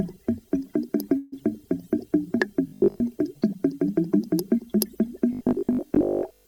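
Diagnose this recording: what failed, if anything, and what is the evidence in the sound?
Call audio freeze at 1.17 to 1.34 s, in the network and jitter-buffer stage. The last sound is drawn out into a fading, buzzy continuation for about 148 ms, then the audio resumes exactly where it left off, so nothing is lost, but everything afterward runs about 148 ms late. The likely cause is packets delayed in transit, draining the jitter buffer and forcing the receiver to extend the final sound until delivery restarted.

Robotic sound from repeated short buffers appears at 2.68 to 3.00 s and again from 5.33 s to the end, in the driver or buffer stage. Both stretches carry a rigid, metallic 50 Hz buzz that loosely tracks the underlying audio. That pitch corresponds to a 20 ms segment being looped, and most of each stretch is made of repeats rather than fresh audio. The likely cause is audio arriving too infrequently, so the software replays the last short buffer while the real content is skipped.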